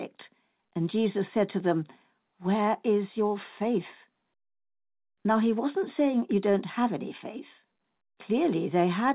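No technical faults can be heard in this speech recording. It came through a WebRTC call path, and its narrow band with nothing above 4 kHz fits the G.711 A-law telephone codec running at 64 kbps.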